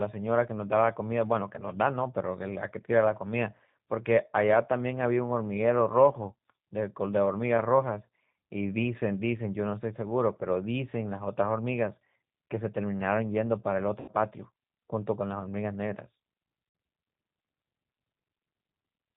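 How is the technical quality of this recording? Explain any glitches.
The technical quality is limited: the whole clip has the rough, slightly synthetic character of G.729 coding, and two brief dropouts disturb the speech later on.

The G.729 codec damage runs from start to finish and is plainly audible, with a grainy, rough edge, which fits an 8 kbit/s G.729A stream. The codec rebuilds each 10 ms frame from a vocal tract filter, a pitch predictor and a handful of pulses, so fine detail is lost. On a spectrogram, everything above 4 kHz is empty, and harmonics look smeared and blotchy.

VoIP packet loss concealed by the speech codec occurs at 14.00 to 14.11 s, with about 80 ms missing, and again at 16.69 to 16.75 s, with about 60 ms missing. Those gaps fit runs of roughly four and three lost packets. The decoder filled each gap by repeating its last pitch and filter at falling gain, so the speech stretches into a fading buzzy tone or coloured noise. 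The waveform shows a shrinking, overly regular stretch, and the spectrogram shows frozen, flat harmonics followed by weak frames as the speech recovers.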